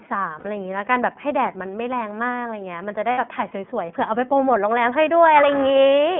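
iLBC codec, throughout the clip: the speech is confined to a narrowband telephone line of roughly 200 Hz to 3.4 kHz, so it sounds thin and lacks sibilant air. The codec damage is plainly audible as a slightly rough, synthetic edge on the voice, which fits iLBC's 13.33 kbps mode with 30 ms frames. Each frame's excitation is coded independently, trading smoothness for robustness.

Lost iLBC frames, at 0.39 to 0.45 s and again at 3.11 to 3.19 s: each gap lasts about 60 ms, which points to two consecutive 30 ms packets going missing. The decoder fills the hole by repeating the last pitch cycle blended with noise, so the gap comes across as a brief held, faintly buzzy vowel rather than silence. Because each iLBC frame decodes without relying on its predecessor, the voice snaps back to normal almost immediately.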